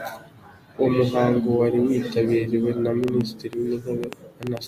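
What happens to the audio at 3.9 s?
At 3.9 s the speech sits inside a train of clicks running from 3.04 s to 4.58 s, starting just after "muhango wari witabiriwe na". Around ten similar sharp pulses arrive at an uneven pace, averaging 5.2 per second and peaking roughly 10 dB above the speech, so they tick and pop over it and through its gaps. The likely cause is repeated impulsive interference from nearby equipment or a faulty connection or power supply.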